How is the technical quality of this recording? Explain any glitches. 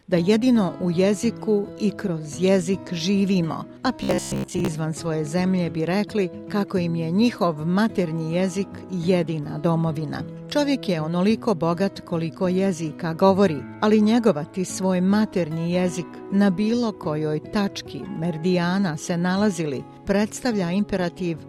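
One glitch stands out. From 4.03 to 4.68 s there is robotic sound from repeated short buffers: most of the audio is replaced by a likely loop of roughly 15 ms chunks. This imposes a rigid 66.8 Hz metallic buzz, visible as evenly spaced vertical striations and a repeating waveform pattern.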